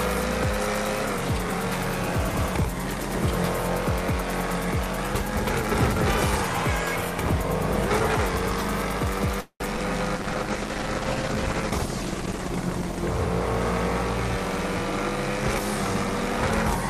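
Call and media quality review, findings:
Call audio freeze, 9.41 to 9.62 s: last sound held as a fading buzz, then about 80 ms of silence, resuming where it stopped. Likely jitter buffer underrun from delayed packets. Nothing lost, but playout delay grows by about 0.2 s.

Short concealed packet loss, 9.76 to 9.79 s: brief smear at the splice. About 40 ms of audio never reached the decoder. Only 7 ms was synthesised, so playout delay shrinks by roughly 30 ms.

Call bitrate drop, 10.16 to 14.46 s: audio turns rough and muffled. Encoder target fell from 64 to 15 kbps after the bandwidth estimate dropped, bottoming out for 2.2 s. Coarser Opus coding and lost high frequencies until recovery.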